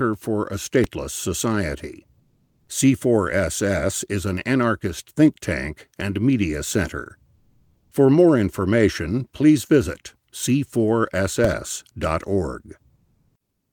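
At 0.84 s there's a DC step, where the waveform's zero line suddenly shifts, heard as a low thump; it holds until 11.44 s. Comfort noise in place of the background shows up at 2.19 s, 7.35 s and 12.95 s, for about half a second, half a second and 0.78 s. The real room tone drops out for a flat, featureless hiss about 3 to 4 dB quieter, likely Opus DTX filling the pauses.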